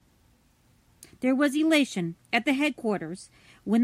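Speech, with no audible technical fault anywhere in the recording.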